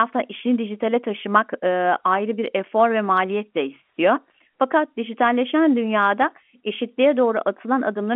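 No technical faults are audible.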